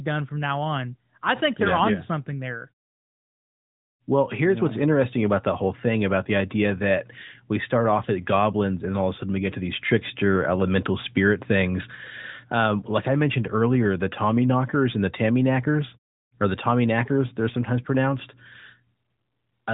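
Nothing goes wrong in this recording; there's no fault to point to anywhere along the way.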